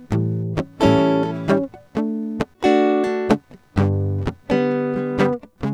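Throughout the music, a faint buzzing chirp sits roughly 40 dB below the signal, pulsing at around 300 times per second. This is computer activity noise: processor or graphics load changes disturb the audio circuit's shared ground, so the interference follows the machine's workload rather than the music.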